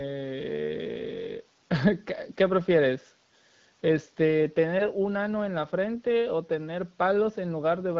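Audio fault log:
Nothing stood out on listening to this speech clip.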